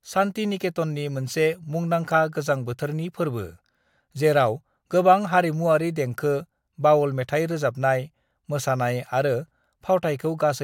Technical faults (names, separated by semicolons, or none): none